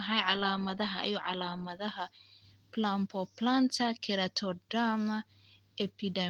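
No technical faults can be heard.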